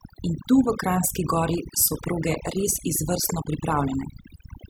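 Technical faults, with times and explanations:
Throughout: overdone noise removal. Noise reduction was set too strong on a noisy speech recording. Whenever a narrow frequency band came close to the level the tool took to be noise, it was pulled right down or cut out. Quieter parts of the voice fell below that line too and went with it. The background drops away, broken up into twinkling specks.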